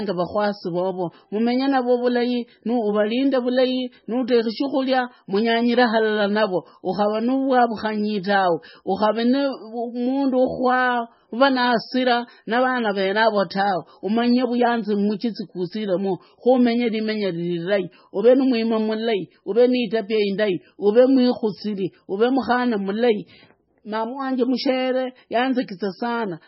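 Throughout, likely heavy MP3 compression: nothing remains above 5.6 kHz, and starved frequency lines flicker between frames, making the speech watery and swirly, consistent with about 17 kbps.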